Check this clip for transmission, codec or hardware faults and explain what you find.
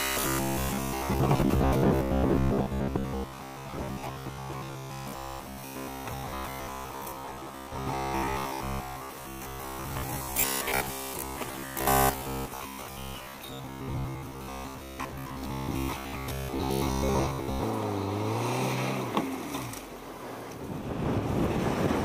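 One fault is present. From 0.02 s to 17.63 s there is robotic sound from repeated short buffers, likely from audio arriving too seldom, so a short stretch, fitting a 15 ms buffer, was replayed for most of that time. This skipped real audio and imposed a rigid, metallic 66.7 Hz buzz.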